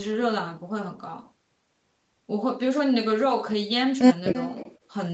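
From 4.34 to 4.76 s, a faint copy of the speech trails it by about 0.3 s, well below the main level; likely an echo leak from a loudspeaker the echo canceller missed.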